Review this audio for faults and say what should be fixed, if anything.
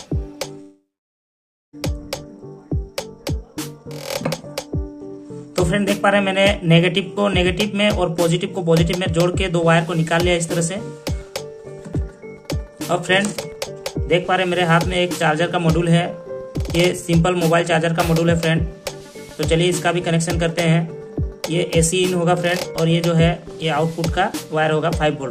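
From 0.61 to 1.75 s the sound smears into a fading buzz, then goes silent for about 0.9 s before returning with roughly 1.1 s missing. That's most likely a long network dropout. Larger jitter buffers or packet redundancy would help prevent it.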